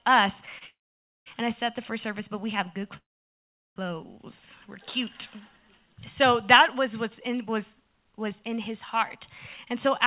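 From 0.59 to 0.63 s a sound is held slightly too long, a short stall from a late packet: the jitter buffer ran dry for about 20 ms and the last sound was stretched.

From 0.67 to 1.28 s, and again from 2.97 to 3.78 s, the last sound carries on briefly, then drops to silence for about 530 ms and 750 ms before resuming exactly where it stopped. These are call audio freezes, likely caused by delayed packets emptying the jitter buffer so that a gap was inserted and nothing was lost. Throughout, the sound has no content above 4 kHz, which fits a 64 kbps G.711 mu-law call path.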